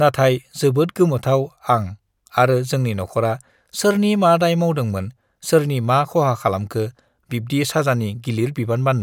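No technical faults are audible anywhere in the recording.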